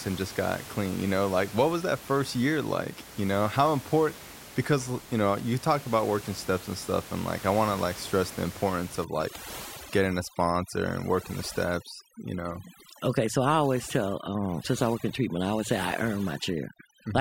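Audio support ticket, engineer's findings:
Background dropping and breaking up into twinkling specks, 9.05 s to end. Overdone noise removal: suppressor set too strong, gating bands near its noise estimate, taking quiet speech detail along. Room noise underneath, about 16 dB below speech.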